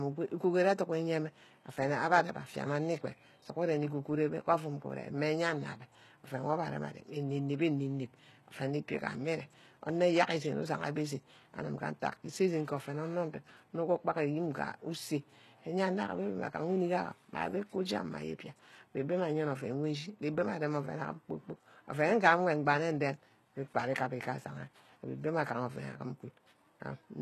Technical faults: HE-AAC compression

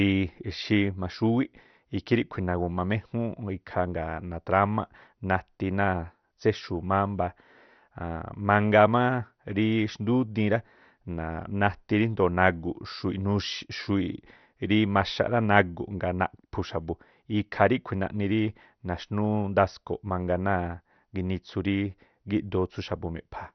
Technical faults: MP2 compression

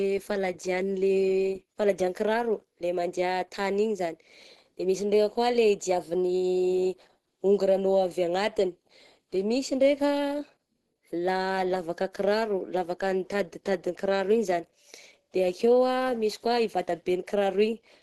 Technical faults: Opus compression

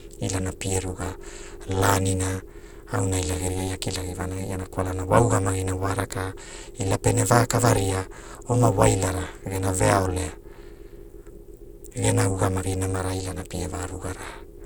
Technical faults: overlap-add ripple

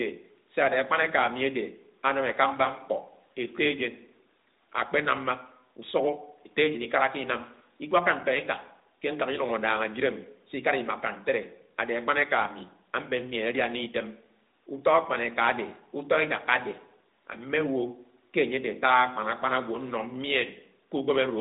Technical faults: none

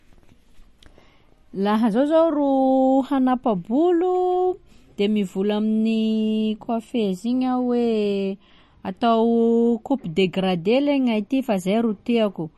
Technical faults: MP3 compression

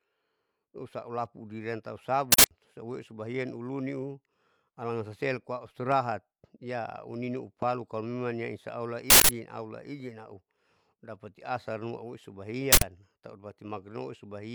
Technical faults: uninitialised buffer; loud pop

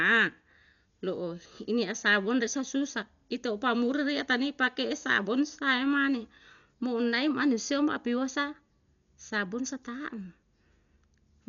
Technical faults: Dolby Digital compression

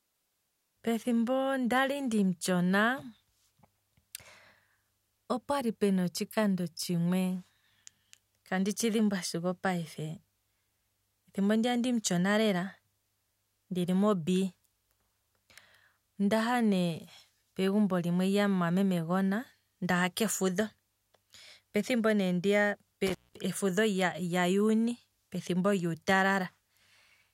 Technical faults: intermittent contact

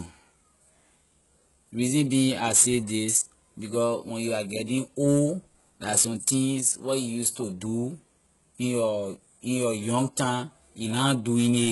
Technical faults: HE-AAC compression

